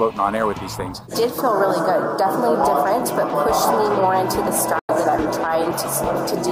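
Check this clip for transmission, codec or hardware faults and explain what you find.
Four faults of two kinds are present: brief skips in the audio and one short muted gap.

Dropped buffer (overrun), at 3.30, 4.48 and 5.71 s: each is a sudden jump in the sound, as if a sliver had been cut out and the edges spliced together. The likely cause is samples being overwritten before the software read them. Roughly 5 ms goes missing at 3.30 and 5.71 s, and about 15 ms at 4.48 s.

Digital broadcast dropout, from 4.79 to 4.89 s: the sound fades out in about 3 ms and stays silent for 96 ms before returning. This is the receiver muting while incoming data was unusable, which fits roughly three lost frames. Whatever was transmitted during the gap is gone.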